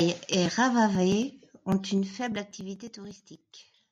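A speech clip with zipper noise from 1.88 to 3.44 s: the level drops about 15 dB in coarse 2 dB steps, roughly five a second, each ticking audibly, unlike a smooth fader move.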